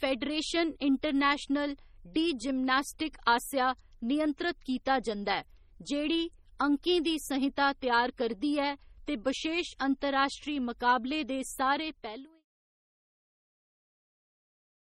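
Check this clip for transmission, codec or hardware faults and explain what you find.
One codec fault runs through the whole clip. Throughout the speech there is heavy watery, swirly smearing, with metallic chirps on s sounds and blurred attacks. The likely cause is MP3 compression at a low bitrate, consistent with about 32 kbps. With so few bits, the encoder drops weak frequency lines that then flicker on and off from frame to frame, producing the swirl. There is no energy above 20.5 kHz. The fade-out that begins around 11.5 s and ends at 12.45 s is smooth, with no step or click.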